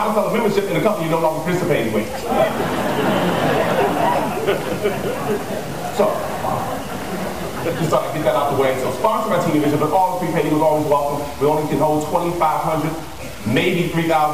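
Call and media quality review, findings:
Grainy, gritty distortion riding on the sound for the whole clip, worst in quiet passages, where it sputters or drops out between steps; error sits about 20 dB below the signal. Likely low bit depth without dither, consistent with truncation to around 5 bits.

Burbling burst of noise blips, 13.56 to 13.65 s. DAB burbling in the receiver's MP2 decode: weak reception let bit errors slip past error correction, corrupting samples so individual sub-bands got short blips of noise, 9 frames hit.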